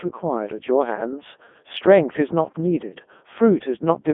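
From start to finish the speech sounds robotic and buzzy, confined to a narrow line band from about 200 Hz to 3.5 kHz and heavily damaged throughout. This is the Codec 2 vocoder at work. Rather than carrying the waveform, it transmits only pitch, voicing, energy and a coarse spectral envelope, and the decoder rebuilds the voice from sine waves. It runs at its highest mode, around 3.2 kbit/s.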